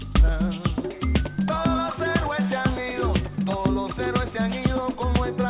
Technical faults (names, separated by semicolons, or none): none